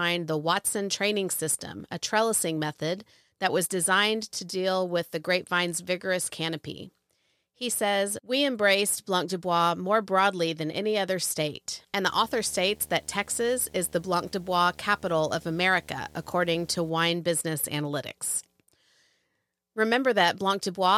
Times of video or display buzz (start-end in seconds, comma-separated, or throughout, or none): 12.08-16.90